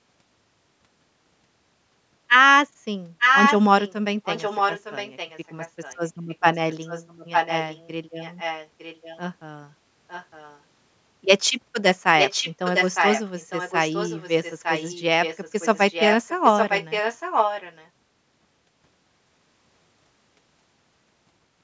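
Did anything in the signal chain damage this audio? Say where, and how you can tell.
Yes. A delayed copy of the speech trails it by about 0.91 s, ranging from faint to as loud as the original, at 3.19–3.59, 3.8–3.93, 4.24–5.97, 6.3–7.88, 8.2–9.19, 10.08–10.6, 12.18–15.01 and 15.22–17.89 s. This echo leak likely arises in call processing: a loudspeaker's output reached the microphone, and the echo canceller failed to remove it.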